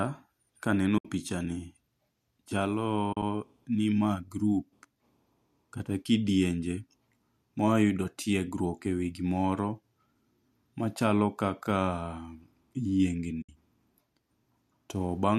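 Right at 0.98 to 1.05 s, just before "picha ni", there's AAC frame loss with muting: about 70 ms where the decoder had nothing and zeroed the spectrum, so the speech fades out and back in with a soft edge. Around 3.13 to 3.23 s, before "ni ma group", the gaps are scattered over 100 ms, the longest run roughly 40 ms. At 13.42 to 13.49 s there's another 70 ms hole. Those short frames fit the low-delay AAC this clip was likely using.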